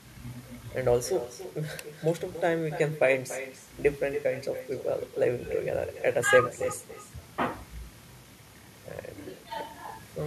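From the first syllable to the end, every phrase in this speech clip is trailed by a fainter copy of itself arriving roughly a third of a second later. That's echo with no canceller: the far end is playing the call over a loudspeaker, its mic hears it, and nothing strips it out, so the audio makes the network round trip and lands back here. The returned copy sits about 12 dB down, and it sounds thinner than the direct sound.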